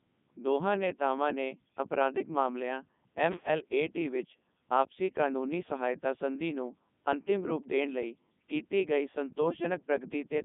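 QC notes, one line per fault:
Throughout, Codec 2 vocoder: the speech is rebuilt from sine waves using only pitch, voicing, energy and a spectral envelope, so it sounds buzzy and robotic, with heavy damage that fits the top 3.2 kbit/s mode. On a spectrogram, energy sits between 150 Hz and 3.6 kHz, with nothing above 3.8 kHz.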